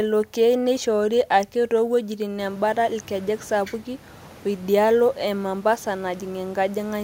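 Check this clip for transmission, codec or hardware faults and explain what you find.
No transmission, codec or hardware problem shows up anywhere in the speech, and the only change is room noise in the recording space, which rises by about 19 dB around 2.5 s and then sits about 27 dB below the speech.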